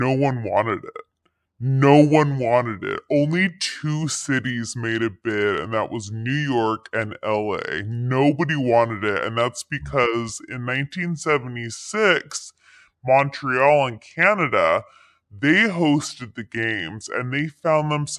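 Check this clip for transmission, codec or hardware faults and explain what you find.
One fault runs through the whole clip: a wrong sample rate. The speech plays at about two-thirds speed and roughly 7 semitones low, which fits 48 kHz material played back at 32 kHz without conversion. Voices sound deep and slowed. On a spectrogram, harmonics and formants sit lower and the whole spectrum is squeezed downward. The waveform looks stretched out in time.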